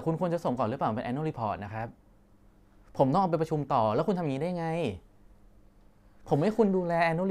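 There are no technical faults to describe in this speech recording.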